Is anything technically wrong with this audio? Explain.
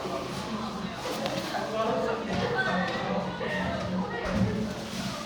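No, nothing technically wrong is audible in this audio.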